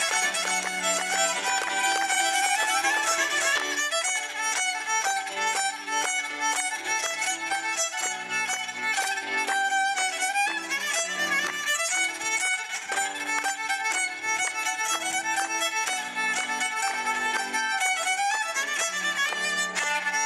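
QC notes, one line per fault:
0.00–3.56 s, doubled audio track: the same audio was likely mixed in twice through a slower second path, so an equally loud, dry, full-band copy trails by roughly 300 ms, already running at the start and stopping abruptly at 3.56 s.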